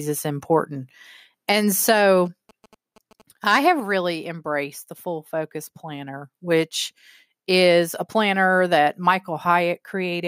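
From 2.26 to 3.92 s there's a patch of GSM signalling bursts: a 2G phone somewhere close is chattering with the network in short groups, the way it does before a call or text lands, and the audio circuitry is rectifying that RF into the speech path. You get a galloping dit-dit-dit of short buzzes at about 217 Hz, sitting roughly 25 dB under the speech.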